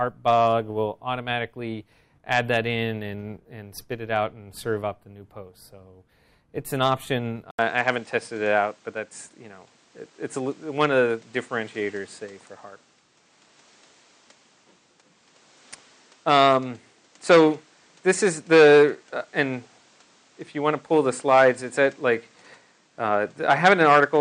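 At 7.51 s the audio drops out for about 80 ms and comes back duller and more closed-in for the rest of the clip, with nothing above 9.4 kHz and a new, faint background noise roughly 35 dB below the signal, while the loudness barely changes. This sudden, lasting shift in bandwidth and noise character most likely means the input switched to a poorer device partway through, such as another microphone or a headset's narrower call profile.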